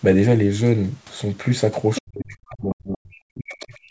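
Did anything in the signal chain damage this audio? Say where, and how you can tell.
Yes. A fainter second voice appears at 1.95 to 2.02 s, then much quieter at 3.5 to 3.65 s: the other side's voice leaking through, likely residue the call's echo canceller missed.

From 2.0 s to the end, the main voice dips, by as much as about 40 dB. This is likely speech suppressed in double talk, with the echo canceller turning both sides down.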